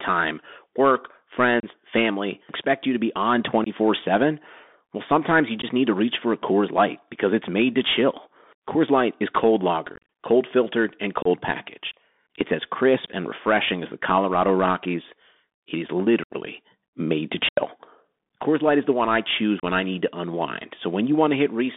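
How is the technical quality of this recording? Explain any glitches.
The technical quality is poor: the speech is narrowband and coarse throughout, and the link drops out repeatedly.

Bluetooth CVSD headset codec, throughout: one-bit adaptive delta coding confines the audio to roughly 200 Hz–3.6 kHz, leaving scratchy sibilants, overload distortion and a granular hiss.

Unconcealed Bluetooth headset packet loss, at 1.60, 3.64, 5.62, 9.96–10.08, 11.22, 16.23, 17.49 and 19.60 s: lost voice packets are replaced by silence or an idle pattern, leaving abrupt holes of 15 to 82.5 ms. The longest single gap, at 17.49 s, runs 82.5 ms, and the speech returns briefly quieter after each. Around 10 s, scattered losses totalling 105 ms across 135 ms make the sound crackly and chopped.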